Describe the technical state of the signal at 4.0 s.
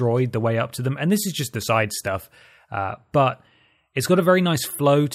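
At 4.0 s the speech signal is intact, with no audible technical fault at that moment.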